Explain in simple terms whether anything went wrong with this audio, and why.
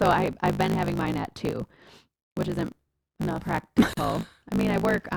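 Two things went wrong here, one running through the whole clip and one at a single spot.

The first is a block size mismatch, the truncated kind. One stage hands over chunks of audio bigger than the next stage takes in, so the tail of every chunk gets dropped. Those regular cuts make a low buzz at about 54 Hz behind the speech for the entire clip, and because slices keep going missing, the talking runs about 1.16 times faster than it should while the voice keeps its character. That pattern fits a stage writing 1024-sample blocks.

The second is a gap at a join of encoded pieces, right after "which isn't enough", from about 3.94 to 3.97 s. The speech just drops out for around 44 ms with smeared edges, then picks up exactly where it left off. That happens when the audio was encoded in separate pieces and stuck together without trimming, so the bit of silence each encoder adds at its start and end got left in at the seam.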